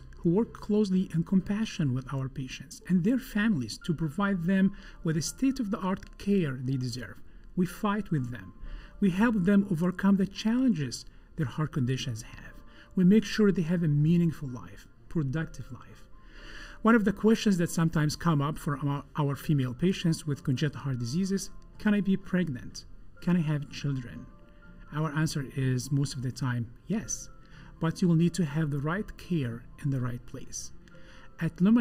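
Channel delay (comb filtering) runs through the whole recording: one channel arrives a little under a millisecond late, and summing the two cancels shared content at regularly spaced frequencies, starting near 700 Hz and repeating roughly every 1.4 kHz, leaving the audio hollow and phasey.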